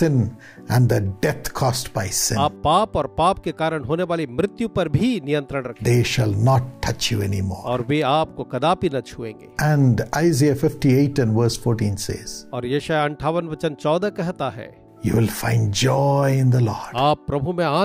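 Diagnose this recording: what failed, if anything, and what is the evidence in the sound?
Nothing failed in this recording, and the sound gives no evidence of any fault.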